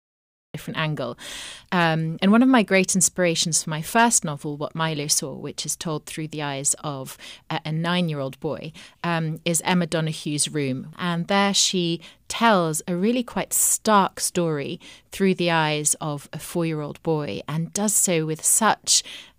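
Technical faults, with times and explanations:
0.00–0.54 s, cut-off start: the clip opens on dead digital silence, then the speech appears abruptly at 0.54 s, already mid-sound with no natural onset or fade-in. The recording or stream began late and caught the talker partway through.
3.98–4.16 s, hard clipping: just after "for my", the loudest peaks turn briefly crackly and rough. The level ran about 2 dB past what a stage could pass, so waveform tops were sliced flat, adding harsh high harmonics over those peaks.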